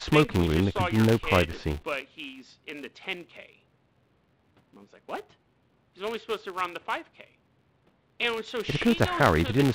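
A filter restarted on every block runs through the whole of this speech recording: the filter drops its stored state at each block boundary and begins again from silence, so every block opens with a small transient. Those repeated clicks fuse into a buzz at 200 Hz, which points to processing blocks about 5 ms long, and the buzz rises and falls with the level of the speech. The call microphone processing the audio passed through trims the lowest bass.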